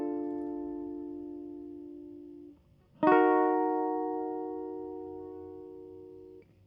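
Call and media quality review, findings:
No findings for this music clip in the call and media quality review.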